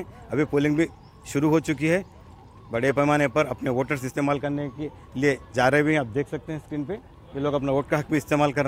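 No dropouts, distortion, noise bursts or other technical faults can be heard anywhere in the audio, so the signal arrives intact with nothing to point to.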